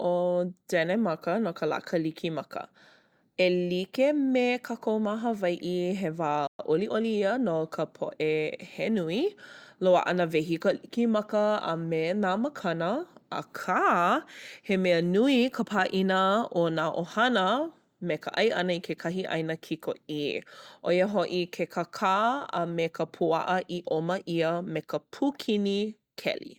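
Speech, interrupted by a playback stall: at 6.47 s the audio cuts out in mid-flow and stays silent for 120 ms, until 6.59 s, then picks up again. The cause is likely the player running dry of buffered data or having its output thread blocked briefly. On a waveform this is a flat, silent gap with abrupt edges. On a spectrogram it is a clean vertical band of empty space crossing all frequencies. From 6.59 s to 7.77 s comes time-compressed catch-up, as the player works off the backlog left by the gap. It removes small slices of audio and cross-fades across the joins, so the speech runs about 1.1 times faster while keeping its normal pitch. A spectrogram shows harmonics at their usual spacing but squeezed in time, with slight discontinuities at the splice points.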